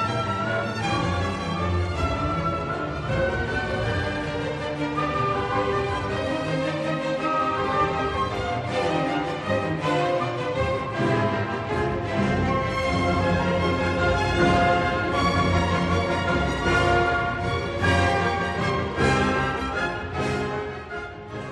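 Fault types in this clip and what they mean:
No fault types turn up in this clip, so there is nothing to list or explain.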